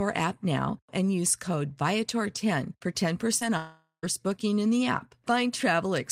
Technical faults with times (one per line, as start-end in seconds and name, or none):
3.39-3.43 short concealed packet loss
3.57-4.05 long network dropout